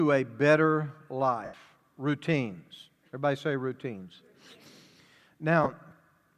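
At 1.44 s, lost LE Audio frames leave a 90 ms hole, which fits twelve 7.5 ms frames. The decoder repeats the last spectrum with random signs, fading it, so the speech smears into noise. At 5.64 s, a 22.5 ms loss causes a brief grainy blur.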